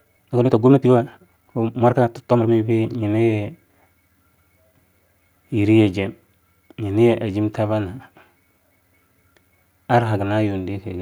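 From 0 to 2.52 s, the speech runs about 1.64 times fast at unchanged pitch. It sounds rushed, likely a time-stretched section.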